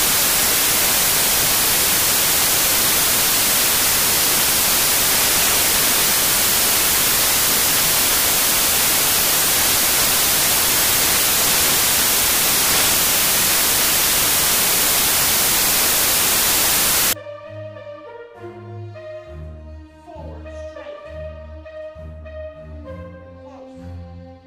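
The audio shows samples built from the wrong bytes from 0 to 17.13 s: loud, harsh noise close to white, unlike added hiss, which stays constant underneath.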